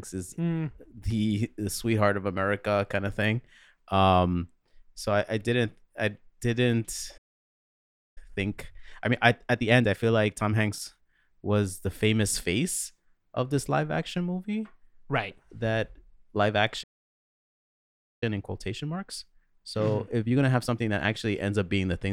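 Playback stall at 7.17 s: the speech cuts to silence for about 0.99 s, likely because the player ran out of buffered data, then resumes at 8.18 s. Time-compressed catch-up from 8.18 to 11.18 s: the player trims its backlog by splicing out short pieces, so the speech runs at 1.25 times normal speed with unchanged pitch. A second playback stall at 16.83 s silences the speech for about 1.39 s, again likely from the buffer running dry, until 18.23 s. Another time-compressed catch-up follows from 18.23 to 21.23 s, with the same hurried 1.25× delivery at normal pitch.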